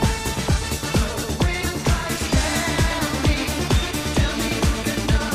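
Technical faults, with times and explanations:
Nothing stood out as a technical problem on listening to this clip.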